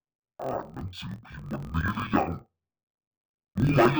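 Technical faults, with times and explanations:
Throughout, interleaved audio read as planar: speech drops an octave, doubled and choppy, with a 43 Hz chop that fits 1024-sample blocks split in half.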